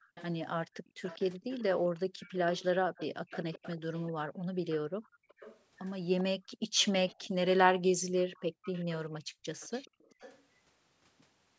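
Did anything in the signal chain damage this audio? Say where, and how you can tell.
Yes, the damage is in the call processing. From 0.0 to 10.43 s a faint delayed copy of the speech, about 392 ms behind and roughly 20 dB down, trails the talker. This echo leak likely comes from a loudspeaker-side echo canceller passing residual pickup back into the call.

The same call processing also shows background gated by the echo canceller. The room sound drops about 40 dB at 0.72–1.02 s, 2.08–2.2 s, 4.27–5.35 s, 6.38–6.77 s and 7.89–9.46 s, then returns. The canceller is clamping the microphone hard while the loudspeaker is playing.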